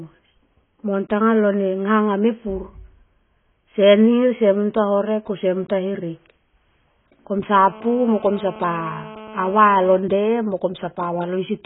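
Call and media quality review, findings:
AAC compression, likely: heavily degraded speech throughout, dull and smeared, with nothing above 3.8 kHz. The encoder has pulled the cut-off right down and quantised the remaining bands coarsely, which fits AAC-LC at around 16 kbps. Mechanism is coding against a hearing model with too few bits to go round.

GSM phone buzz, 7.54 to 9.96 s: hard, raspy buzz at 217 Hz with lots of harmonics, sitting about 19 dB under the speech and holding steady, which fits a 2G handset on a call. Its burst transmissions get rectified in the audio circuitry.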